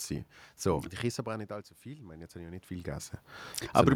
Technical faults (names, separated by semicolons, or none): automatic gain rising